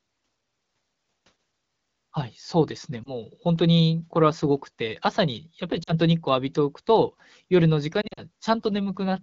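Radio errors corrupted AMR speech frames, so the decoder had to conceal lost AMR speech frames by repeating the last good pitch and vocal tract settings at falling gain. At 3.03 to 3.14 s a brief warble fits one missing 20 ms frame. At 5.83 to 5.94 s a longer drop toward near silence fits two lost frames. From 8.01 to 8.21 s several scattered losses over about 160 ms break the sound into dips, with the voice coming back weak or rough after each.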